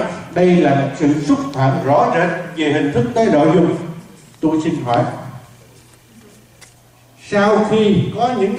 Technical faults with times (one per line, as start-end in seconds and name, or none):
none